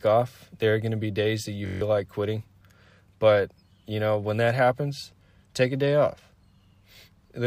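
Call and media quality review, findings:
System hang loop, 1.66–1.81 s. Steady buzz at 46.9 Hz: one 21.33 ms speech fragment repeated 7 times, fitting a 1024-sample ring buffer. Driver/host stalled; hardware kept replaying stale buffer. About 150 ms of speech lost.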